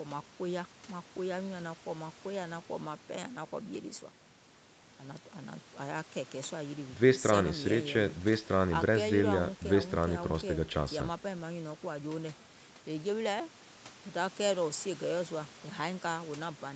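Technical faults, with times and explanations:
No technical faults heard.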